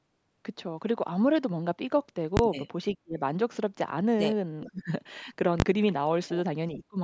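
At 2.37 s there is a loud bang, caused by invalid numbers at full scale. A calculation produced infinite or invalid values, which were forced to full scale for a 20 ms block. The block is so short that it is heard as one bang. The same fault repeats at 5.6 s.

After the first bang the speech dips sharply. This happens at 3.03 to 3.19 s, at 4.65 to 4.92 s and at 6.76 to 6.98 s. The level falls by about 30 to 35 dB. This is likely speech suppressed in double talk: the echo canceller mistook the talker for echo and turned the speech down.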